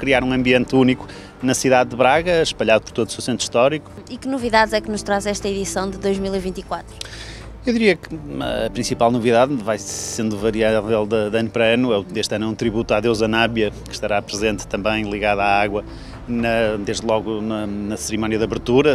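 At 9.94 s a system hang loop sets in and lasts until 10.17 s. The host or driver stalled while the sound hardware kept replaying one ring buffer, so a single 46.44 ms slice repeats five times, a rapid stutter at about 21.5 Hz that fits a 2048-sample buffer. Little or no audio is lost. On a waveform the identical segment tiles end to end; a spectrogram shows vertical seams every 46 ms.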